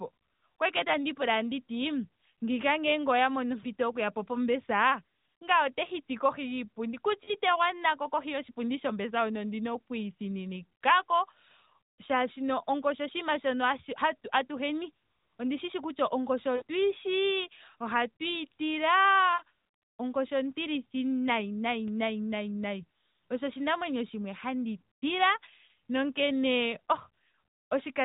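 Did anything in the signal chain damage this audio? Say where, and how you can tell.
Yes, in the network stage: lost AMR speech frames at 7.24–7.34 s, 16.56–16.62 s before "yishi ohatuyi", 19.34–19.42 s before "onkoshi ontilithi nayi", and 25.66–25.68 s. The decoder repeats the last good frame with falling gain, which fits one to three dropped 20 ms frames. On a spectrogram the harmonics freeze flat and then dim.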